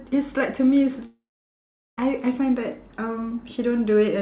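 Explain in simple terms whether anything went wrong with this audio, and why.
At 1.06 s the speech turns into a fading buzz that quickly sinks to near silence, and it resumes at 1.99 s with nearly a second of it gone. This is most likely a long network dropout. Unlike a brief glitch, the gap is too long to cover up, and the missing part is skipped rather than played late.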